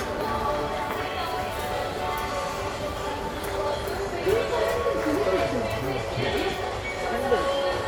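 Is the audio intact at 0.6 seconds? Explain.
Yes, the sound at 0.6 s plays through cleanly, with no dropout, click, distortion or other fault at that point.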